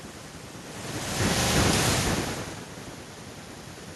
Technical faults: none

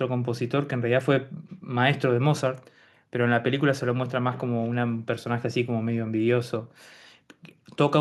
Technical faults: none

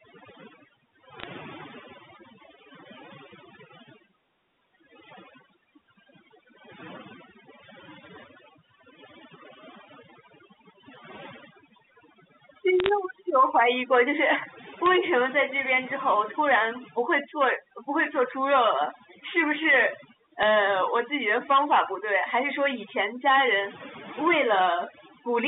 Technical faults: overdone noise removal; bit errors on a digital phone line

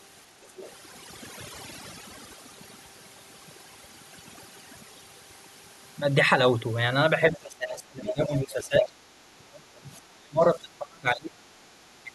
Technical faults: overdone noise removal; other side's voice leaking through; speech suppressed in double talk

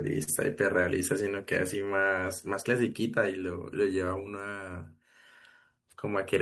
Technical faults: clock drift between sender and receiver; short stall from a late packet; repeated timing corrections

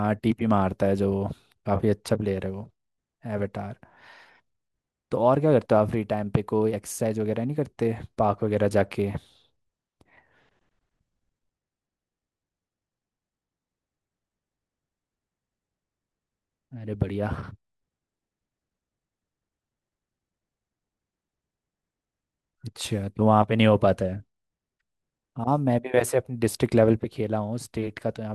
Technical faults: none

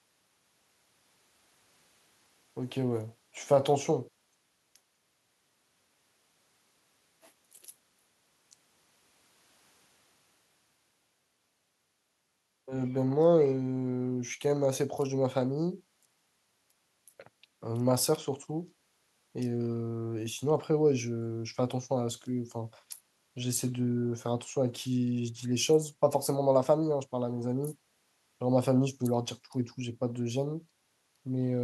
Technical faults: none

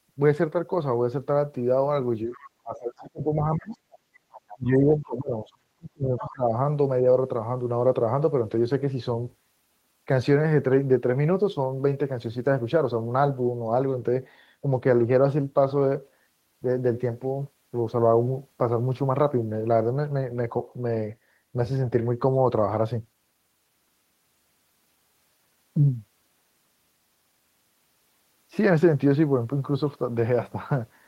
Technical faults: speech suppressed in double talk; other side's voice leaking through

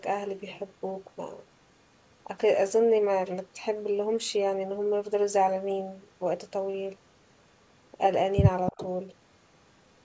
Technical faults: echo leak

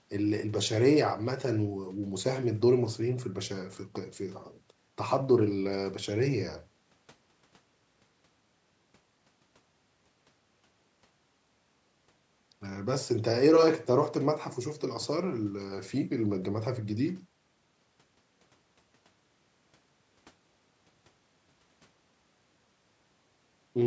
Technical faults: none

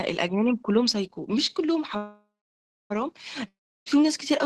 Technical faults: call audio freeze; long network dropout

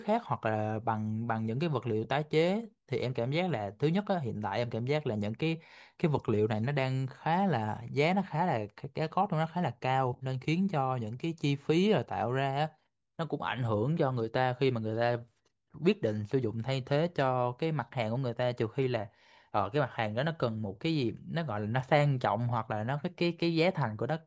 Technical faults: none

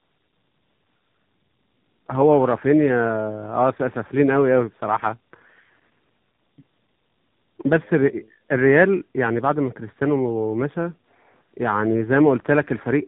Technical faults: tandem speech coding

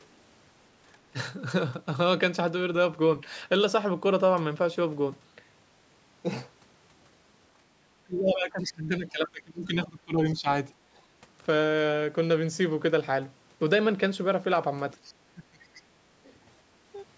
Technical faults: speech suppressed in double talk; other side's voice leaking through

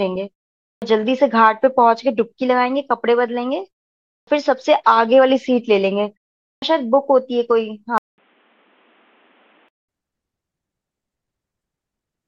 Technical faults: clipped start after a pause; input switched to a poorer device

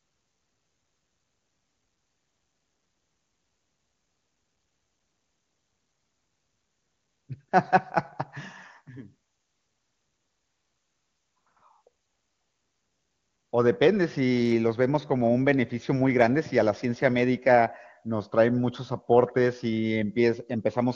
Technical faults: none

